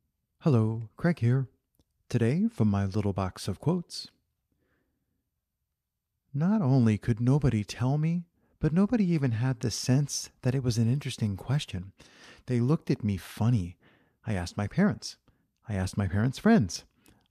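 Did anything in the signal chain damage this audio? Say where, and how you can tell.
Yes, at the codec stage: compressed frames skipped at 3.94 s. The speech jumps ahead roughly 50 ms, consistent with about two 24 ms frames being dropped.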